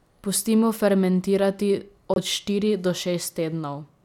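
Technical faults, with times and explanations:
2.14–2.18 s, Bluetooth dropout: the speech cuts to silence for about 23 ms, which fits one lost frame, and likely comes from a packet arriving too late. Unlike a playback stall, it resumes further along, with the missing moment skipped rather than delayed.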